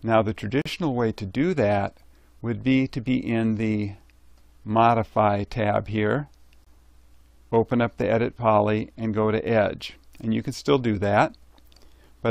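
At 0.62 s, a 40 ms gap between stream segments cuts in, and at 6.65 s a shorter one of about 19 ms. Each is a hard-edged silence inserted at a 6-second segment join. Unlike a dropout, no sound is lost: everything after it simply arrives later.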